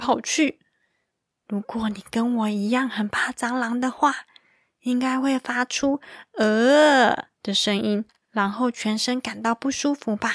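No faults can be heard anywhere in this speech recording. Nothing in it breaks, drops out or distorts at any point.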